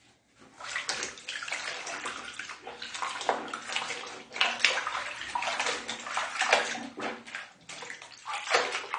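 AAC compression runs through the whole clip: nothing comes through above 9.7 kHz, leaving the top end dull and the detail smeared, with a fizzy, warbling grain on sustained sound. The likely cause is an AAC-LC encoder working at a bitrate around 32 kbps. At that rate it lowers the cut-off to save data and quantises the remaining frequency bands coarsely against its hearing model, so the damage is plainly audible.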